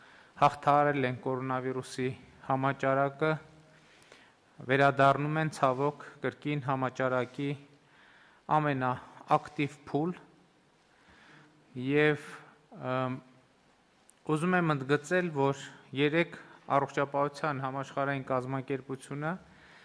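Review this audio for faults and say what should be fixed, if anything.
No faults turned up in this audio, so nothing needs to be fixed.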